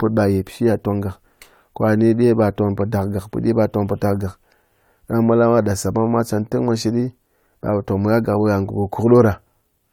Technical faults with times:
none

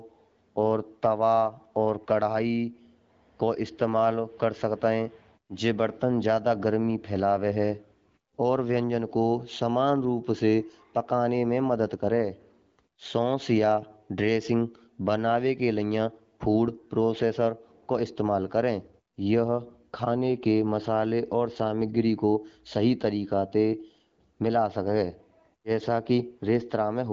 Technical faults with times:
none

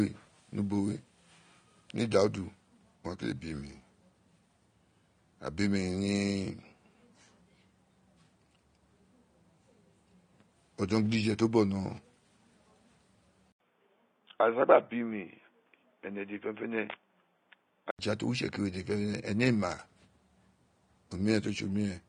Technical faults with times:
0.00-22.09 AAC compression
13.52-17.99 input switched to a poorer device

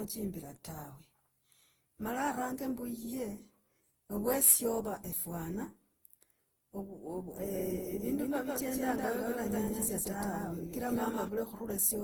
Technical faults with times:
0.00-12.03 generation loss
7.38-11.28 doubled audio track

